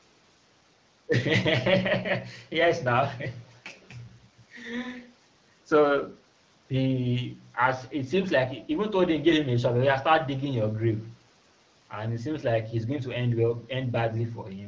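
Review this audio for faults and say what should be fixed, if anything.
Nothing needs fixing: the speech carries the expected call-path signature, with nothing above 8 kHz from the call microphone processing and AMR wideband (HD Voice) coding at 12.65 kbit/s, a rate at which the speech stays clear.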